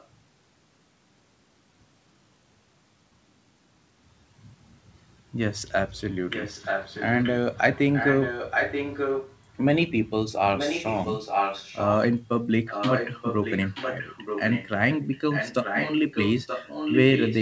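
A delayed copy of the speech trails about 0.93 s behind, faint at 0 to 0.08 s, then much louder at 6.3 to 7.32, 7.74 to 9.37, 10.56 to 11.95, 12.66 to 14.69 and 14.91 s to the end. It's likely an echo leak from a loudspeaker the echo canceller didn't fully cancel.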